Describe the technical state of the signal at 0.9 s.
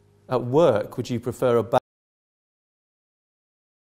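At 0.9 s the signal is intact, with no audible dropout, clipping, distortion or other technical fault at that moment.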